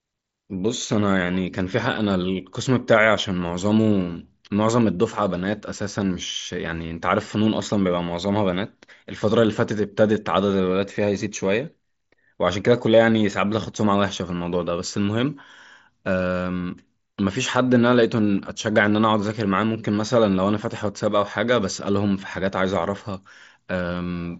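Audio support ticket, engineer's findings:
Nothing stood out on listening; the speech comes through the Bluetooth mSBC headset path with its band topping out around 7.7 kHz, as that link is built to do.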